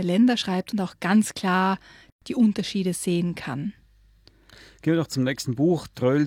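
Speech with a gap at a join of encoded pieces from 2.10 to 2.22 s, right after "und auch ganz klar": a gap of about 117 ms, left by untrimmed encoder delay and end-padding. Unlike a dropout, nothing is lost; speech resumes exactly where it stopped, with smeared edges.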